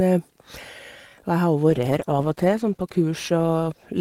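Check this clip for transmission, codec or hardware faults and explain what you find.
One fault, a call bitrate drop, is present from 1.70 s to the end of the clip. The encoder's rate falls from 48 to 13 kbps and stays at its lowest for 1.48 s, so the speech is coded coarsely and loses its upper frequencies, sounding muffled and watery. Unlike packet loss, there are no gaps or glitches.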